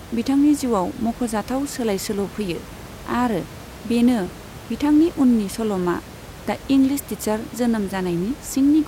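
No technical fault can be heard in this recording of speech. A room noise sits in the background at about 18 dB below the speech; it belongs to the space where the microphone was.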